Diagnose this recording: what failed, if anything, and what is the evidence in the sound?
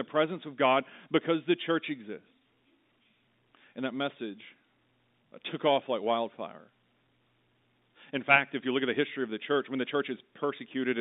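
Nothing failed: the speech runs through standard G.711 telephone coding at 64 kbps. The band is limited to roughly 200 Hz to 3.7 kHz, as a phone line should be, and any coding damage is at most faint.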